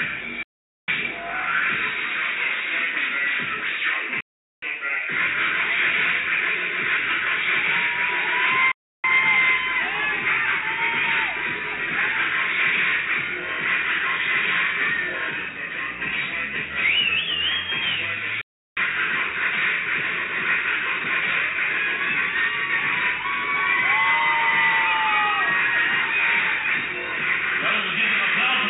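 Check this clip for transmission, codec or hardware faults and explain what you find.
Four digital broadcast dropouts interrupt the clip. The sound cuts out at 0.43 to 0.88 s, 4.20 to 4.63 s, 8.72 to 9.04 s and 18.41 to 18.77 s. Each gap lasts between about 0.32 and 0.45 s. The receiver lost good frames and muted until valid ones returned. The mute comes in over about 3 ms, so each hole starts almost as a hard cut. Whatever was sent during these gaps is gone.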